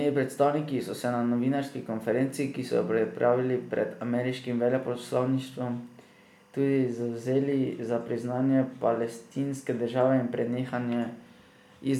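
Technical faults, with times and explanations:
Throughout, timecode bleed: faint chirping warble near 1 and 2 kHz, some 35 dB under the speech, from 23.976 fps timecode leaking across.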